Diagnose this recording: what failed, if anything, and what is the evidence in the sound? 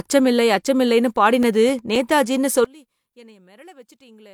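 The fault is at the storage or playback stage: CD scratch ticks between 1.17 and 2.48 s. Six evenly spaced ticks cut into the speech, the longest around 4 ms. A scratch destroys more data than error correction can rebuild, once per disc revolution, so the player interpolates or mutes those samples. On a spectrogram they appear as six thin broadband vertical lines at a regular interval. On the waveform they show as brief notches or flattened slivers.

From 2.65 s to the end, the speech and its background both collapse by about 28 dB, leaving only a faint residue. The likely cause is one channel inverted in the wiring, so the common content cancels when the two channels are summed to mono and only their small mismatch survives. On a spectrogram the whole band dims abruptly to a weak trace at 2.65 s. On the waveform the amplitude shrinks sharply and stays low.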